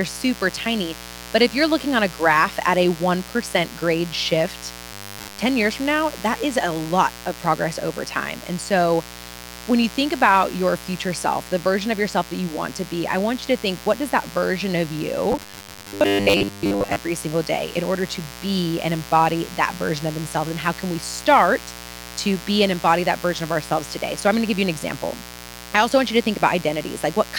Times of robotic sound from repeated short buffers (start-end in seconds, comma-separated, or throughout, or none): 4.93-5.40, 15.32-16.97